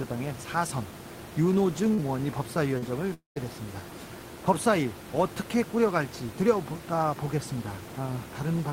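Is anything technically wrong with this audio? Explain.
Yes, there are network-related faults in this speech, plus room noise sitting about 13 dB below the speech, which belongs to the recording rather than the system.

From 1.93 to 2.01 s there is a burst of packet loss. The receiver stretched the last sound for about 45 ms and faded it, and then about 40 ms of audio is missing. This sounds like a brief held sound fading out and then a jump ahead. On a spectrogram, the last sound's spectrum freezes and dims before the content resumes.

From 2.78 to 2.85 s comes a short concealed packet loss. The decoder covered about 40 ms by extrapolating the preceding sound and then crossfading back. The result is a small smear or wobble. In the waveform it appears as a brief, unnaturally regular stretch with smoothed edges.

Three single packets were lost and rebuilt from error correction, at 1.98 to 2.00 s, 2.82 to 2.84 s and 3.36 to 3.38 s. 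Each is a 20 ms low-bitrate copy carried in the following packet, so there is no gap, only a grainier, noisier frame. On a spectrogram, each shows as a thin slice with blurred detail.

From 3.14 to 3.39 s the audio drops out for about a quarter second, most likely a long network dropout. About 220 ms never played. A fading continuation of the last sound gives way to roughly 140 ms of near-silence, which the waveform shows as a flattened envelope and the spectrogram as a blank band before the speech returns.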